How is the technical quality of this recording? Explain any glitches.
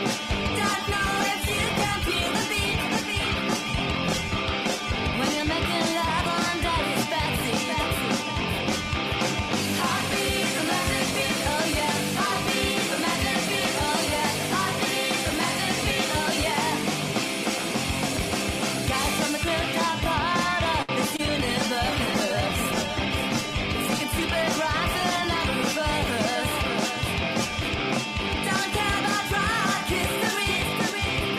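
The recording has clear network glitches. Quality drops twice for several seconds, and there is a brief hold followed by a small gap.

From 0.37 to 5.59 s, and again from 21.17 to 26.96 s, there is a call bitrate drop. The encoder fell from 64 kbps to 18 kbps, then to 20 kbps. It stayed lowest for about 5.2 s and 4.5 s. Coarser coding makes the sound rough and watery, and it may also lose its top end.

At 20.82 s there is a short stall from a late packet. The buffer ran dry, so the receiver held the last sound for 65 ms. It then resumed where it left off, and nothing was lost. The sound lingers briefly.

From 21.17 to 21.20 s there is a short concealed packet loss. About 20 ms never arrived, and 17 ms of it was filled by extending the preceding sound. You hear it as a tiny smear or wobble.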